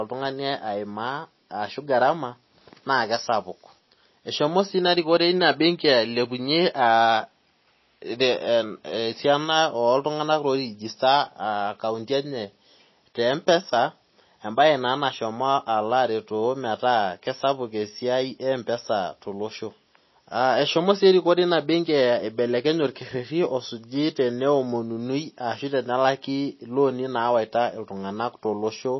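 Throughout, nothing is heard above 5.8 kHz and the speech has a watery swirl that plain low-pass filtering lacks, likely MP3 compression at about 24 kbps.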